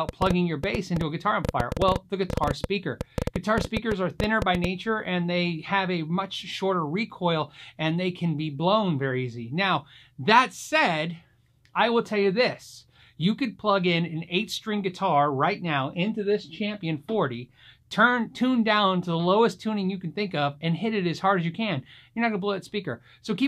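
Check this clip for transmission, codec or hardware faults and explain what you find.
One hardware-type fault is present. From 0.09 to 4.65 s, a train of clicks ticks and pops over the sound, around 40 of them at an uneven pace of about 8.3 per second, peaking well above the signal. The likely cause is interference from nearby equipment or a faulty connection or power supply injecting repeated pulses.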